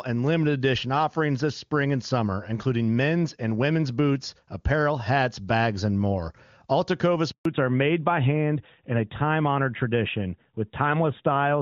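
At 7.31 s a handover gap silences the speech for 140 ms while the call changes networks; the waveform falls flat until 7.45 s. From 7.45 s onward, a fallback to narrowband leaves nothing above 4 kHz, making speech duller and rougher, with a hard spectrogram ceiling at 4 kHz.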